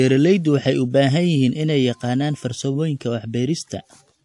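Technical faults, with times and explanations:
Throughout, transcoding between lossy codecs: nothing is present above 11.3 kHz, and two layers of artefacts are heard together. The likely cause is a low-rate MP3 around 48 kbit/s re-encoded as WMA around 96 kbit/s, with the second codec spending bits on the first one's smearing.
1.52 to 4.25 s, sample clock jitter: a faint rough hiss rides on the speech, strongest on loud and bright sounds and gone in pauses. Sampling instants wander by under a microsecond, putting error about 50 dB below the signal.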